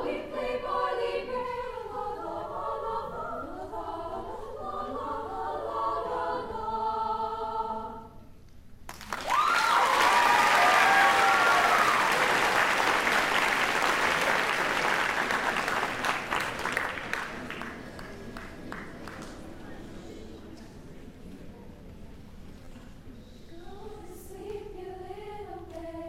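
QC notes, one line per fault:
10.98–11.01 s, repeated buffer: fresh audio arrived late, so one roughly 11.6 ms block, consistent with a 512-sample buffer, replayed twice more, giving a hard-edged buzzy stutter.
16.94 s, repeated buffer: the same brief underrun recurred, one block playing one extra time, heard as a single sharp click where around 10 ms of audio went missing.
22.65–22.67 s, repeated buffer: another late delivery made the last short block sound twice more with abrupt joins, producing a clipped buzz and losing roughly 20 ms.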